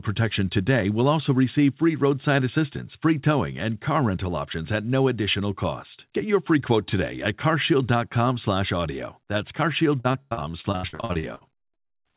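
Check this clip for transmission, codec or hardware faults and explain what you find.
One fault, over the last two seconds. Throughout the clip the speech is band-limited with nothing above 4 kHz, which fits a narrowband G.711 call.

From 10.0 to 11.98 s there is repeated packet loss with a robotic sound. Roughly two dozen gaps, the longest 94 ms, are patched by stretching the previous sound, so about 37% of the span is concealed. The speech turns choppy, with pieces missing. On a spectrogram this appears as smeared, repeated frames, and the waveform shows periodic, copied segments.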